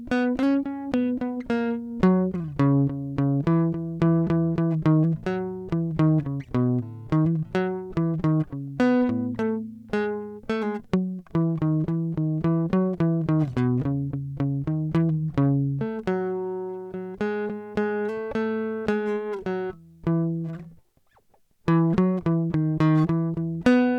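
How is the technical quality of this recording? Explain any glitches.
Listening to the music, nothing stood out as a technical glitch anywhere in the recording.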